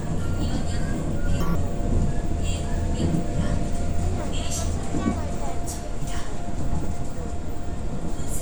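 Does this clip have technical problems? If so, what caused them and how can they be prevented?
Yes. From 1.41 to 1.55 s the sound suddenly rushes ahead at twice its normal speed, jumping up an octave. This is audio read two samples at a time (double speed): the reader treats each pair of samples as a single frame, as if the data were stereo or twice as wide. That halves the playback time, doubles every frequency, and folds high content back as aliasing. Prevent it by making the reader's assumed channel count and sample width match the actual stream format.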